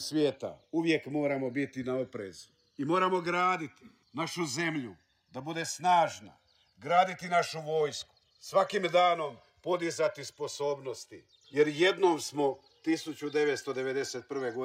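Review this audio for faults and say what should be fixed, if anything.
The two channels are drifting apart across the whole clip: their clocks differ by roughly 150 ppm, so the offset grows to about 3 ms by the end. Summed to mono, the comb notches glide slowly downward as the delay grows, heard as slow flanging. Lock both devices to a shared word clock or resample one to match the other.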